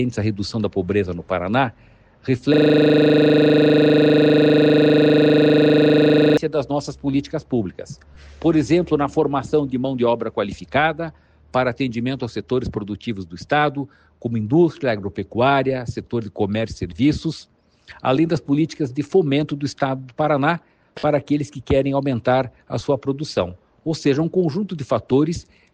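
From 2.54 to 6.37 s, a system hang loop replays one 40 ms segment, which fits a 40 ms ring buffer, producing a steady 25 Hz buzz.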